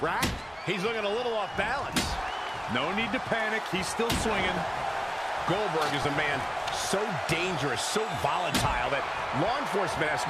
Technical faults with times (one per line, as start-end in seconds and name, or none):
6.03-6.05 lost LE Audio frames